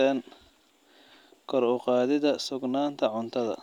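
No technical faults are audible anywhere in the speech.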